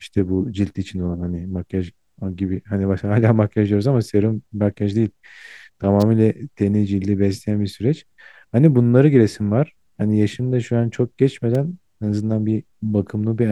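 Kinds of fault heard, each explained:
Electrical switching spike: a nearby switch or motor likely arced onto the audio line, adding sharp snaps over the speech near 6.0 s and 11.55 s.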